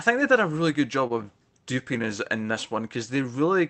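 At 1.07 to 1.19 s, after "a really good job", a late packet emptied the jitter buffer. This short stall from a late packet holds the sound about 25 ms too long, with a faint buzz or dip.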